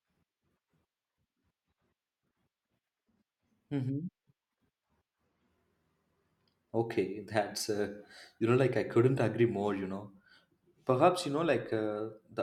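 No technical faults are audible anywhere in the speech recording.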